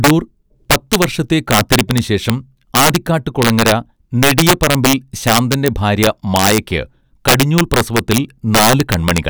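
Integer overflow runs throughout the speech: peaks driven about 9 dB past full scale wrap to the opposite sign, roughly one percent of samples, giving violent cracks on loud syllables.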